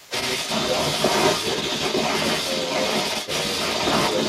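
Right at the start, from 0.0 to 0.12 s, the speech is suppressed in double talk: the talker's level sinks by roughly 15 dB for about a tenth of a second while the far side is also talking. The likely cause is an echo canceller that could not separate the local voice from the loudspeaker echo and pulled both down. It differs from a network dropout because it coincides with the other voice.

From 0.0 s to the end of the clip, the other side's voice leaks through as a second voice alongside the talker, around 10 dB louder. It is likely residual echo that the canceller failed to remove after the loudspeaker played the far end into the microphone. It is distinct from room reverberation because it is a separate voice with its own timing rather than a smeared tail of the talker's own speech.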